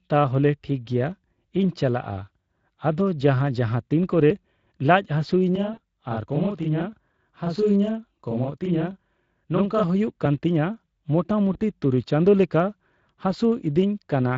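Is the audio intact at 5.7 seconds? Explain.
No. Around 5.7 s, three faults overlap.

From 5.56 s to 9.83 s there is a channel delay (doubling). One channel runs 40 ms behind the other, and the two were folded into mono. Because the late copy arrives at equal strength, a delay that long doesn't blend in as tone colour. It is heard as a second, trailing image of the sound, a slap-like doubling laid over everything in that span.

Inside that span, from 5.73 s to 5.79 s, there is VoIP packet loss concealed by the speech codec. About 40 ms of data never arrived, so the decoder filled the gap by repeating its last pitch and spectral shape at falling gain. The gap becomes a short buzzy tone or coloured noise that fades out. Because each decoded frame builds on the one before, the speech stays weak and distorted briefly after real data resumes.

Underlying all of this is the Speex codec, which runs through the whole clip. 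Its damage fits a setting of roughly 20 kbps. At that rate the CELP coder has too few bits to model the excitation faithfully, so the speech sounds noisy and hoarse, and anything above 8 kHz is only a shaped noise fill.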